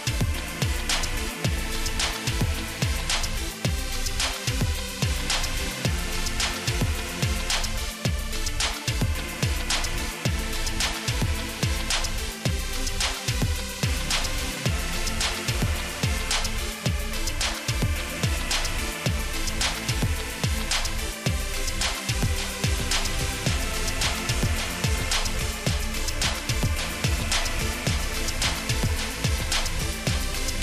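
A second, slower capture path or an out-of-step edit likely mixed the sound in twice, producing a doubled audio track from 22.23 s to the end. A flat, full-band copy about 10 dB quieter trails roughly half a second behind, switching on abruptly.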